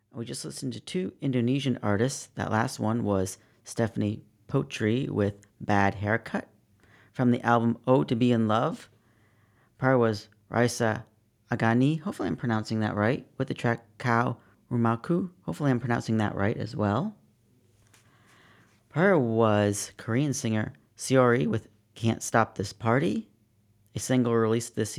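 A speech recording whose opening shows automatic gain rising. From 0.11 s to 2.81 s the level climbs steadily by about 8 dB, with the voice and the room background swelling together rather than the talker getting louder. The gain control judged the input too quiet at the start and ramped its gain up over those few seconds, settling just before "one was". The first phrases are therefore noticeably quieter than what follows.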